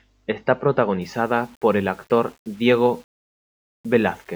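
From 1.02 s to the end, the speech turns grainy, with a gritty distortion that tracks its loudness and sputters in the quietest stretches, around 35 dB below the signal. This is low bit depth without dither, likely an 8-bit rounding with no dither applied.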